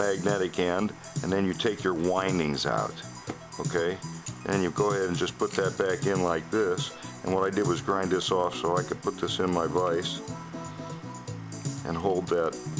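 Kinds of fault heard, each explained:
Resampler restarted on every block: The rate converter processed each 20 ms block in isolation, so at every block boundary it filtered against silence or the wrong end of the block instead of the true neighbouring samples, leaving a small error at each edge. The character of the conversion fits a drop from 44.1 kHz to 16 kHz. Those edge errors recur 50 times a second, heard throughout as a steady 50 Hz buzz that rides on the sound and falls away whenever the signal does.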